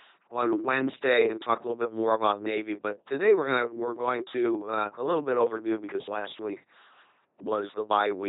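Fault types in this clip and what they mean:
LPC-10 vocoder: speech rebuilt from a pulse- or noise-driven vocal tract filter, heavily buzzing and robotic throughout, nothing above 3.8 kHz, fitting 2.4 kbit/s coding.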